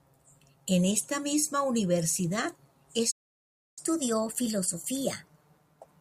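At 3.11 s the speech cuts off mid-flow and the output goes completely silent until 3.79 s, a playback stall of about two-thirds of a second, likely because the player ran out of buffered data. On a waveform it is a flat line; on a spectrogram, a blank vertical band.

From 3.79 s to the end, the player catches up at higher speed, resampling its backlog at 1.1 times normal rate. Speech sounds hurried and raised by about a semitone and a half. A spectrogram shows harmonics shifted upward and syllables compressed in time.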